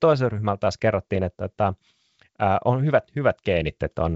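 The speech comes through G.722 wideband telephone coding with nothing technically wrong in the signal.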